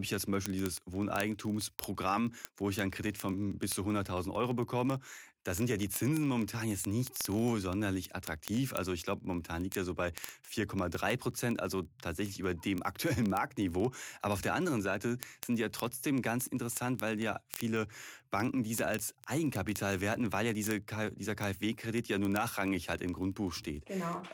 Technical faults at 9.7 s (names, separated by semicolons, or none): word clock ticks